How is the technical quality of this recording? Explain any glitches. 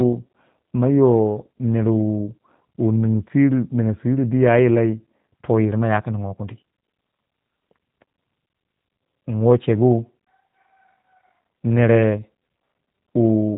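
The recording has passed through a low-bitrate speech codec, and the damage is plainly audible from start to finish. Throughout the clip, the G.729 codec has stood in for the original waveform: the speech was reduced to a vocal tract filter, a pitch predictor and a handful of pulses per frame, at a rate that fits 8 kbit/s VoIP. Everything above 3.8 kHz is gone, so the speech sounds dull and band-limited, with a rough, slightly synthetic buzz in the voiced sounds.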